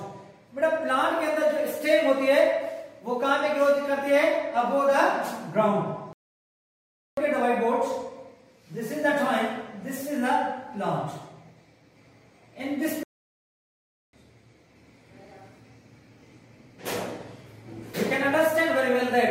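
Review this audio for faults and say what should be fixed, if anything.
Two playback stalls occur: the sound halts abruptly at 6.13 s and stays silent until 7.17 s (1.04 s), then again from 13.03 s to 14.13 s (1.10 s). The output simply stops mid-flow, likely because the player ran short of buffered data or its audio thread was blocked. Unlike a brief dropout, which lasts only milliseconds, each gap here is a full second of dead silence. A larger playback buffer and a higher-priority audio thread should prevent it.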